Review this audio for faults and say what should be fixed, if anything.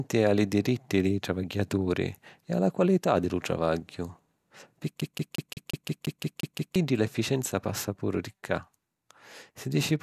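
A CD stuck on one turn: the laser keeps jumping back one track at the same point on the disc, most likely because of a scratch, so from 5.01 to 6.76 s a 175 ms slice of the speech is played ten times in a row. Each jump leaves a short mute before the slice starts again, giving the fast, even stutter of a skipping CD. That stretch should be replaced with a clean read of the same passage. Cleaning or replacing the disc and ripping it with an error-correcting, secure-mode ripper that re-reads damaged sectors would prevent this.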